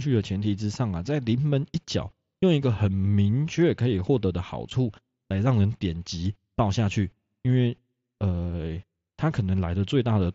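No technical faults can be heard in this speech recording.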